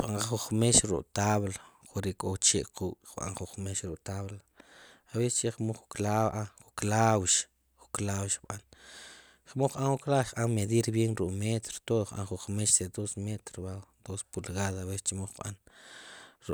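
A speech recording with no technical faults to be heard anywhere in it. Nothing in the signal calls for a time mark or an explanation of cause.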